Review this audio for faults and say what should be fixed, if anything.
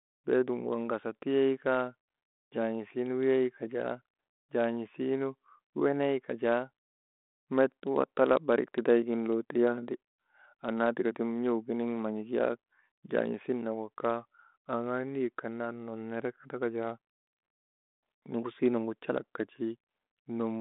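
Nothing needs fixing: the speech sits in a 32 kbit/s G.726 telephone band of about 250 Hz to 3.6 kHz, with nothing above 3.9 kHz and only the light coding texture expected of that path.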